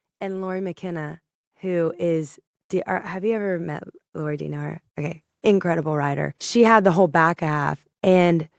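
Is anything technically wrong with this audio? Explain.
Yes, there are two episodes of automatic gain rising. From 0.2 to 2.41 s, and again from 3.12 to 5.27 s just before "incredible writer", the gain control judges the input too quiet and lifts it gradually, by about 8 dB and then about 5 dB. Unlike a speaker simply talking louder, the background noise swells along with the speech over roughly two seconds. The absence of anything above 8 kHz fits the call codec's bandwidth.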